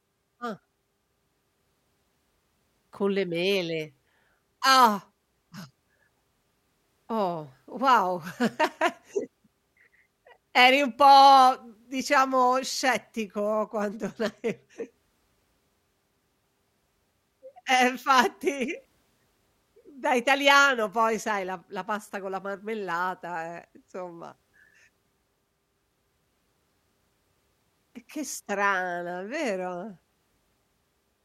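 No technical faults are audible.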